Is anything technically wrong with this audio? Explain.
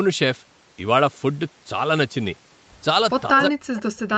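Yes, there are two faults near the end of the speech, both pointing to an echo canceller struggling while both ends of the call were active.

From 3.31 s to the end of the clip, the speech sounds suppressed in double talk. The level sinks and breaks up, at its deepest falling by roughly 40 dB. This is likely because the far side spoke at the same time and the canceller couldn't tell the local talker from loudspeaker echo, so it attenuated everything. On a waveform the envelope collapses in ragged steps. On a spectrogram the energy fades into gaps and thin, patchy bands, all within the 8 kHz limit of the call path.

From 3.76 s to 3.82 s there is an echo leak: a faint, delayed copy of the voice about 0.18 s behind the original and roughly 20 dB quieter. It sounds like a brief ghost under the attenuated speech. The likely cause is a far-end loudspeaker whose sound reached its microphone and was not fully cancelled before being sent back. 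On a spectrogram it appears as a weak repeat of earlier harmonic patterns, shifted 181 ms to the right.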